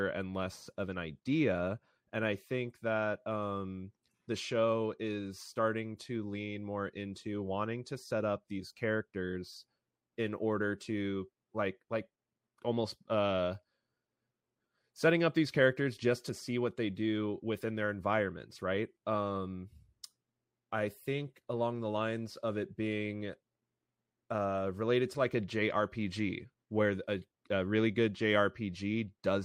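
Speech recording, with no technical faults audible anywhere in it.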